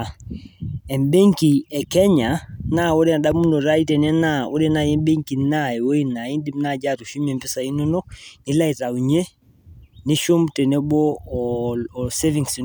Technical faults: none

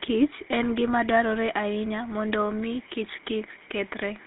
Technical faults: GSM full-rate codec

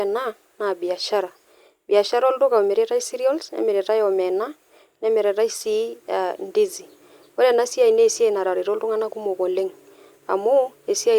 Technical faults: none

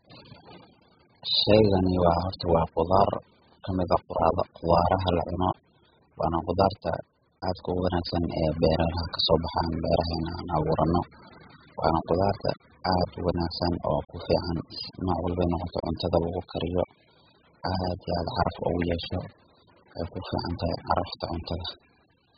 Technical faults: AAC compression

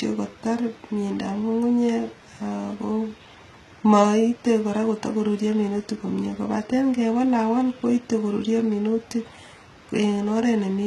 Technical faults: HE-AAC compression

